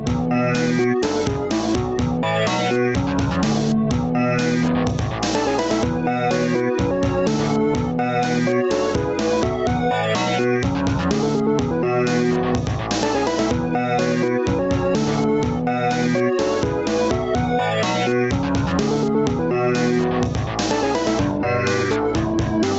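Gain pumping runs through the whole clip: the gain ducks by roughly 10 dB under each loud sound, leaving the levels squashed together. The likely cause is gain set far too high, with a fast limiter clamping each peak. Unlike a noise gate, it turns the gain down rather than cutting the sound out. The ceiling near 8 kHz comes from the call path, consistent with Opus at around 32 kbps.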